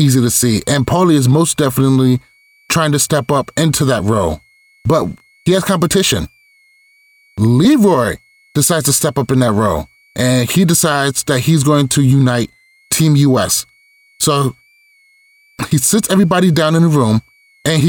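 A faint high whistle, far below the speech and drifting between 2.0 and 2.5 kHz, runs throughout. This is switching supply whistle: a power supply cycling at audible rates.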